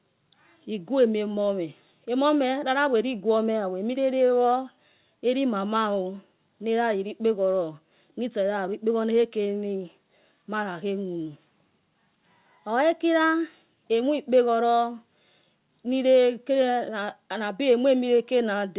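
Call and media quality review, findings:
No faults found in the speech. The call path is audible as narrowband audio with nothing above 4 kHz, which fits G.711 A-law at 64 kbps.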